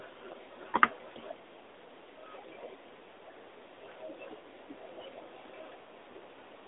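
Nothing stood out on listening to this speech recording.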